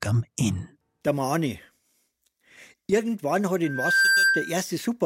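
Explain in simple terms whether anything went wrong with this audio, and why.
A microphone picked up its own loudspeaker, so the sound kept looping round and building on itself. This is loudspeaker feedback squeal. From 3.64 to 4.61 s a single high tone near 1.6 kHz swells up over roughly 0.4 seconds, ending up slightly louder than the audio.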